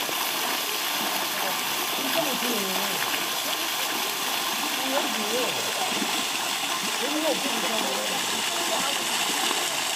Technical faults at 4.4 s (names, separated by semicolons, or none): none